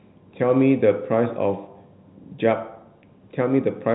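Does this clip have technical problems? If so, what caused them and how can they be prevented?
No, no technical faults found.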